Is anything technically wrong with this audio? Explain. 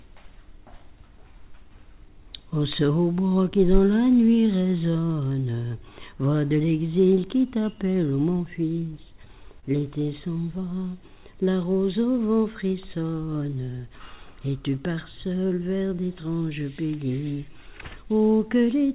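Yes. The audio has timing and packet-loss faults. It passed through a narrowband call path with nothing above 4 kHz, which fits G.711 mu-law at 64 kbps.

Clock drift between sender and receiver runs through the whole clip. The pacing feels slightly sluggish and unsteady, with small hiccups recurring at uneven intervals rather than on a regular beat. The sender's audio clock runs roughly 3% slower than the receiver's. The receiver's jitter buffer therefore keeps draining, and the receiver has to keep compensating to avoid running dry.

Repeated timing corrections are the audible result of that drift, from 0.29 s to the end. The playback drifts to about 98% speed, with tiny stretches and slight stumbles that always push in the same direction but are irregularly spaced. Each correction repeats or extends a short piece of sound to refill the buffer. Together they add roughly half a second over the clip, heard as a gently wavering tempo.

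Scattered short gaps appear in two stretches. Between 1.87 and 2.86 s, about three brief ticks or smears occur, the longest around 15 ms. Between 9.25 and 12.72 s, about seven occur, the longest around 30 ms. Each is a lost or late packet that the receiver papered over by continuing the preceding sound. Only about 2% of each stretch is concealed, so the audio stays clear apart from these small blips.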